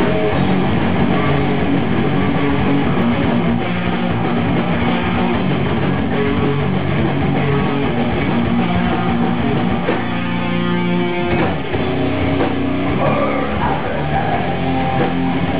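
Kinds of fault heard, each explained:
Doubled audio track: a second, full-band copy of the sound runs about one second behind the original at roughly 5 dB lower, with no decay or added room colour, so everything is heard twice in a flat, distinct repeat. The copy is already present when the clip begins and cuts off abruptly at 3.02 s. The likely cause is the same audio being captured again through a slower path, or an edit leaving two copies out of step.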